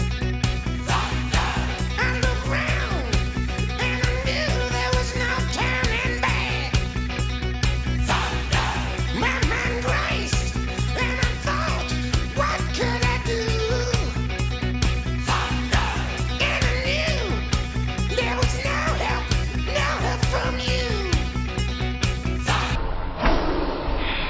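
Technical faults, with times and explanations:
22.76–24.29 s, wrong sample rate: the sound slows to 0.363x speed and drops about 17.6 semitones, consistent with 44.1 kHz material played at 16 kHz without conversion.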